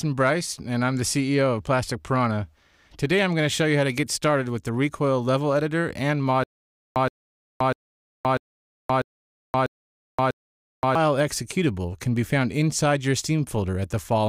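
A likely playback stall from 6.44 to 10.95 s causes a stutter with silent gaps: a 122 ms fragment repeats seven times, each followed by about 523 ms of digital silence.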